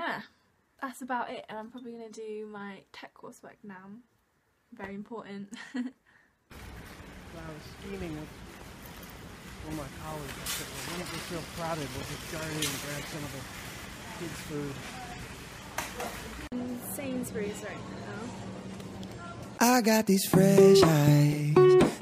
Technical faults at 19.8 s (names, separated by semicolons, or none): none